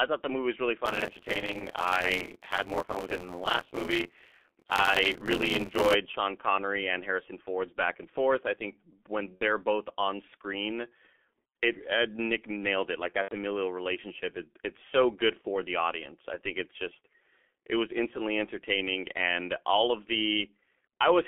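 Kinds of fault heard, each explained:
G.723.1 codec: The whole clip passes through a low-rate telephony codec at about 6.3 kbit/s. Only roughly 250 Hz to 3.5 kHz survives. The damage is heavy. The speech sounds muffled and hoarse, and consonants smear together.
Buffer tearing: The writer and reader of a playback ring buffer have slipped out of step. From 0.85 to 5.95 s, just after "the movie was really", a rattling buzz at 86.1 Hz rides on the speech. That fits a 512-sample buffer with a bit under half replaying audio about 20 ms old.
VoIP packet loss concealed by the speech codec: Lost packets were filled by the decoder guessing from its last pitch and filter. Short stretches of buzzy tone or coloured noise that fade replace the speech. They fall at 9.35 s (60 ms, between "forth I think when" and "both on screen"), 13.22 s (90 ms) and 15.41 s (30 ms, between "it it's so good" and "the audience I think").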